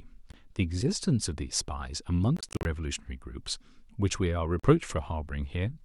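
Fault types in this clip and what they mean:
Bluetooth dropout: The speech cuts abruptly to silence in short holes and then picks up further along, as if it had kept playing through the gap. This points to audio packets likely arriving too late at the wireless headphones and being discarded. A gap of about 20 ms falls near 0.32 s and one of 41 ms near 4.6 s. Between 2.37 and 2.65 s, about 142 ms goes missing in scattered runs no longer than 41 ms.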